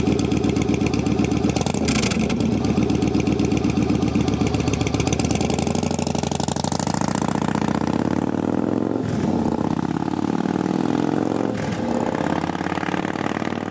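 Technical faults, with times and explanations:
Throughout, gain pumping: the input gain is likely set far too high, so a fast limiter clamps down on each loud sound and lets go in the gaps. The gain swings around 15 dB, and the sound is squashed.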